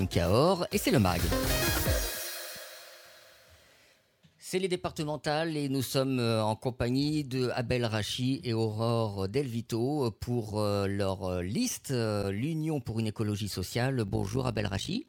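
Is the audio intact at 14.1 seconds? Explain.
No. From 14.08 s to the end of the clip, the audio shows overlap-add ripple. The sound was split into windowed frames and reassembled with overlaps whose gains don't add up to a constant, so the level dips and swells once per frame, by about 11 dB. Repeating at roughly 50 times a second, that pulsing turns into a fast flutter, a coarse tremolo laid over everything in that stretch.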